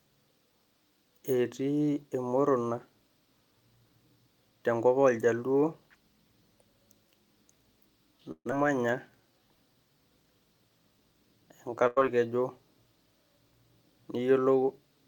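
From 8.31 to 8.53 s, a long network dropout likely cut off the incoming audio. The receiver extends the last sound for about 199 ms as a fading buzz or hiss that sinks into roughly 70 ms of silence, and about 100 ms of speech never returns.

Between 9.10 and 9.56 s the receiver's jitter buffer triggers a slow-down by repeating pitch periods to add 79 ms. Speech plays at about 85% speed with unchanged pitch, so sounds stretch out.

At 11.87 to 12.06 s a burst of packet loss leaves roughly 100 ms undelivered. The receiver covers it with about 92 ms of continued, fading sound, then resumes further along, with about 15 ms added and the missing stretch skipped.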